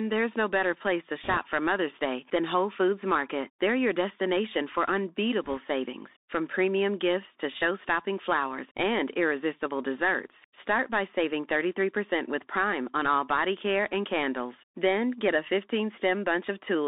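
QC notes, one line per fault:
Throughout: Bluetooth CVSD headset codec. The sound is squeezed into a narrow telephone band, roughly 250 Hz to 3.7 kHz. The one-bit delta modulator can't track fast, loud high-frequency movement, so sibilants come out scratchy and loud peaks are blurred by slope overload. A fine granular hiss sits under everything, which fits a 64 kbps CVSD stream. On a spectrogram the energy stops at a hard ceiling near 3.7 kHz, with an empty floor below 250 Hz and a speckled noise floor filling the band.
1.24–1.37 s and 5.44–5.57 s: bit errors on a Bluetooth voice link. The first burst follows "no better place to". The second follows "your destination for" and ends just before "savings from premium". Each lasts about 0.13 s and sounds like a rushing, crackly wash rather than sharp clicks. In CVSD every bit moves the output by only one small adaptive step, and the damage fades quickly, so error rates of a few percent give noise, not pops. 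On the waveform the trace thickens and turns fuzzy without isolated spikes. The spectrogram shows a brief broadband haze within the band and no vertical click lines.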